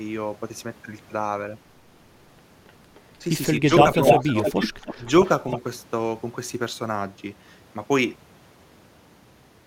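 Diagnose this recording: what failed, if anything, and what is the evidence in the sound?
Call processing is where this goes wrong. A delayed copy of the audio trails about 0.3 s behind. It's faint at 2.68–2.72 s and 2.95–3.0 s, roughly as loud as the original from 3.66 to 5.09 s, and about 10 dB down at 5.25–5.6 s. That's echo leak: the far end's echo canceller likely let its loudspeaker pickup slip back down the line.

Inside that loud stretch you also get speech suppressed in double talk, with short dips of around 10 dB at 4.31–4.37 s and around 15 dB at 4.96–5.02 s. The canceller likely couldn't separate the talker from the echo, so it ducked both together.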